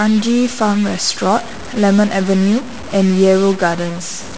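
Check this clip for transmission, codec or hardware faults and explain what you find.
One hardware fault runs through the whole clip: a stuck bit. From start to end the speech carries a harsh, buzzy distortion, and the gaps between phrases are filled with a steady noise instead of silence. The likely cause is a single data bit held fixed at 0 or 1 by a broken line or converter. Roughly half the samples are then pushed off by that bit's weight, a step of around -25 dBFS. That is a fairly significant bit, which is why the noise in the pauses is so prominent.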